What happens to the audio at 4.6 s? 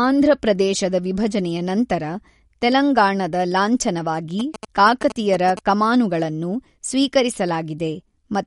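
From 4.40 to 5.59 s, right after "ತೆಲಂಗಾಣದ ಲಾಂಛನವಾಗಿ", GSM signalling bursts cut in. A nearby 2G phone's radio bursts are rectified by the audio circuitry, producing a galloping dit-dit-dit of short 217 Hz buzzes roughly 10 dB below the speech. A spectrogram shows clustered columns of harmonics spaced 217 Hz apart, and the waveform shows grouped trains of sharp pulses.

Underneath, and across the whole clip, is plainly audible MP3 compression. It sounds watery and swirly, with nothing above 11.2 kHz, which points to a low bitrate around 48 kbps. The likely cause is weak frequency lines being dropped frame by frame. A spectrogram shows a flat ceiling at 11.2 kHz and flickering holes below it.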